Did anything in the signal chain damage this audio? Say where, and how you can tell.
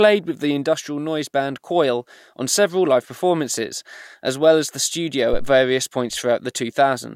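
Yes. The damage is in the analogue input stage: a phantom power thump at 5.33 to 5.53 s, just after "as in the studio". A deep low thud peaks at about -11 dBFS and dies away within roughly 45 ms. Switching the supply on a live input sent a voltage step through the coupling capacitors.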